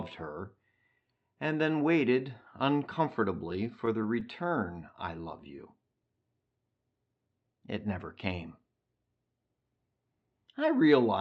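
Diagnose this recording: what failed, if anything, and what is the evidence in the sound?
Between 3.53 and 4.33 s the speech catches and drags in six brief hitches, the longest about 11 ms, with roughly 56 ms of filler in total and nothing actually lost. These are repeated stalls (stutter) at the network and jitter-buffer stage of the call path: packets arrived late or too slowly, the buffer ran dry each time, and the receiver extended the last sound until fresh audio arrived, so the rhythm stumbles without any gap in content.

From 5.21 to 5.82 s the speech stretches out, running at about 93% speed with unchanged pitch and drawn-out sounds, about 53 ms longer than it should be. This is a jitter buffer slow-down in the receive buffer: to rebuild its reserve, the receiver repeated single pitch periods several times over, padding the signal rather than resampling it, which is why the timing lengthens while the pitch stays put. 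Both faults sit on top of the Opus call codec, whose roughly 8 kHz upper cutoff applies throughout.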